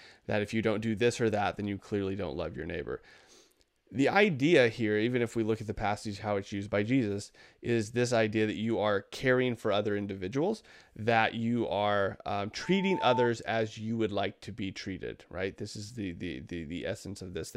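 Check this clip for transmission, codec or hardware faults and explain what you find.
One fault stands out, a loudspeaker feedback squeal from 12.62 to 13.32 s. A microphone re-amplifies its own loudspeaker until an 890 Hz tone swells over roughly half a second to about 5 dB above the speech. A spectrogram shows one brightening horizontal line; the waveform's envelope visibly balloons.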